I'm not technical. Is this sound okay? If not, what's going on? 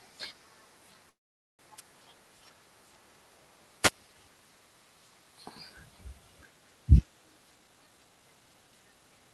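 No. Around 1.09 to 1.62 s there is a call audio freeze, likely from network packets arriving late: the sound stops for about half a second, then picks up exactly where it left off. At 1.77 to 1.81 s and again at 3.82 to 3.91 s, there are wireless microphone noise hits: the radio signal weakened briefly, and each is heard as a short burst of static. From 7.56 s to the end, there is a jitter buffer speed-up: the call system trimmed tiny slices to catch up, so the speech runs about 28 percent fast and sounds hurried, though not higher-pitched.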